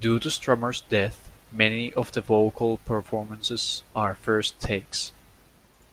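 Nothing in this speech recording stands out as a technical fault, so there's nothing to flag here.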